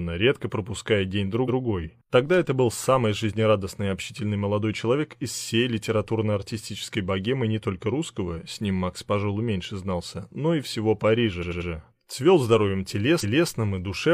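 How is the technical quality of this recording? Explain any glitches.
The recording has three stutters where a short stretch of audio plays again. These are repeated frames: a run of compressed frames was written more than once, so the decoder replays it and the audio runs longer.

At 1.44 to 1.58 s, a 139 ms block repeats once, adding 0.14 s. At 11.38 to 11.66 s, a 93 ms block plays three extra times, a rapid triple stutter that adds 0.28 s. At 13.19 to 13.48 s, a longer 279 ms block repeats once, adding another 0.28 s.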